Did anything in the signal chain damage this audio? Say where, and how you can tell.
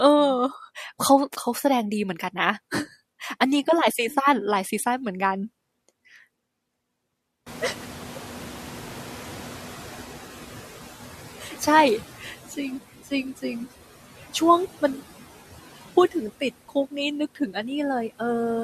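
Yes. The damage is in call processing, where a noise suppressor runs across the whole clip, attenuating the background by about 12 dB. The noise suppressor artifacts show up as a residue that drops away between phrases and returns under the speech. The gain is decided band by band, frame by frame. On a spectrogram the noise floor looks blotchy and gated, with small isolated time-frequency speckles rather than an even wash.

The noise suppressor catching up is audible from 7.46 s to 11.25 s. The room noise jumps by about 22 dB at around 7.5 s and then sits about 17 dB under the speech. The suppressor's noise estimate lags, so that noise first passes with little reduction and only settles about 11 dB down after 3.79 s of adaptation. A spectrogram shows the broadband floor stepping up and then fading gradually instead of holding level.

Speech cut by the noise suppressor occurs between 17.35 s and 17.56 s, just before the end. 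For about a tenth of a second the gain falls by up to about 12 dB. The suppressor has classed a soft stretch of speech as noise and pulled it down with the background, so it sounds swallowed. The waveform shows a brief notch in the speech envelope, and the spectrogram shows the energy there dropping.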